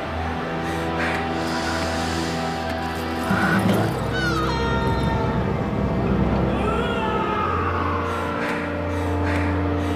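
No technical faults are audible anywhere in the clip.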